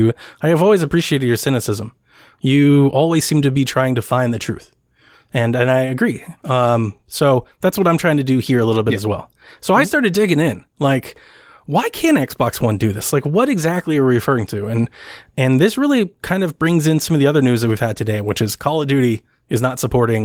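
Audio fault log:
Nothing in this speech recording stood out as a problem on listening.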